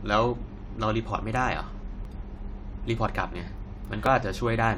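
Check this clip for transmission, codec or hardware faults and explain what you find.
The speech has one recurring transmission fault. Overlap between stream segments occurs at 1.06 s, 2.05–2.07 s, 3.07 s and 4.06 s, roughly once per second, which fits 1-second segments. Adjacent segments claim overlapping time, so the player discards about 16–20 ms of genuine audio. The waveform jumps at each join, heard as a small click or skip.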